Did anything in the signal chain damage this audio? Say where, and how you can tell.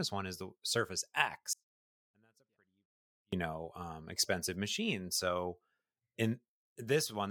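Yes. An audio dropout to a faint residue runs from 1.53 to 3.33 s: the speech cuts abruptly for about 1.8 s, leaving only a faint leak roughly 40 dB down. A live path carrying leakage likely points to an intermittent analogue connection or input switch.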